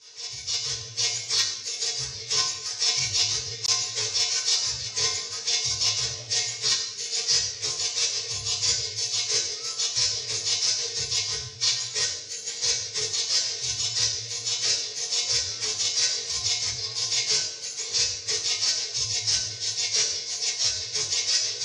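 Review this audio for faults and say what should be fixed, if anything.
At 3.66 s a block of digital silence appears: about 20 ms of samples drop to zero and then resume, with no fade on either side. The edges at the start and end of the gap are abrupt, so the result sounds like a short hole. To prevent it, make sure the audio path always delivers a complete buffer on time, and guard against invalid values that could be written out as zeros.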